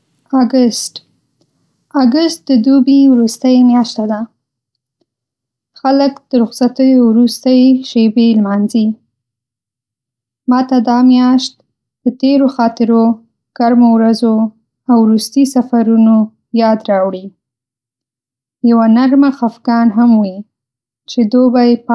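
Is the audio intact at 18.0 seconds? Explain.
Yes, at 18.0 seconds the speech is intact, with no audible dropout, distortion or other fault at that moment.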